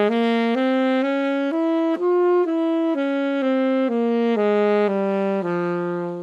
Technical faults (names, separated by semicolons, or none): none